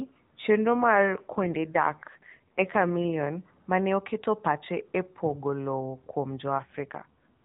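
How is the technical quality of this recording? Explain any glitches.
The speech comes through a narrowband mobile channel, with nothing above 4 kHz and light AMR-NB coding texture. Two stretches degrade further.

AMR rate drop, 0.66–3.17 s (ending just before "ma ne") and 6.58–7.44 s: the voice turns buzzier and more synthetic with no gap or band change. This fits the network lowering the codec rate from 12.2 to 5.9 kbps and spending the bits on error protection.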